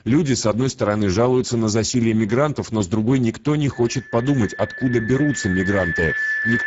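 From the start, the speech carries Speex codec damage that is plainly audible. The CELP coder has too few bits for the excitation, so the voice sounds hoarse and grainy, and the band toward the 7.7 kHz cut-off is a hissy, noise-like fill rather than real detail. That fits a bitrate near 10 kbps. Unlike MP3-style swirling or a plain low-pass, the roughness sits in the voice itself.

At 3.72 s, right after "с другой никто не", a loudspeaker feedback squeal begins. The microphone is picking up the speaker it drives, and at 1.7 kHz the loop gain exceeds one, so that single tone grows by itself over about three seconds until it is roughly as loud as the speech, still sounding when the clip ends. A steady hum or test tone keeps a constant level, but this one swells steadily.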